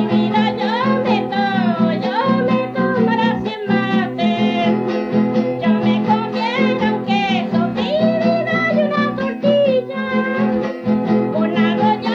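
No technical faults can be heard.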